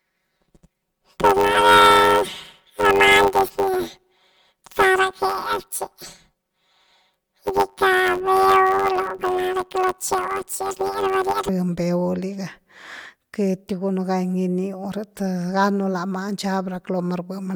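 From the start to about 11.49 s the speech has planar audio read as interleaved. Each roughly 10.7 ms chunk, which fits a 512-sample block, plays its left half and then its right half at double speed. With blocks that short you get a robotic buzz near 94 Hz rather than a clear octave jump.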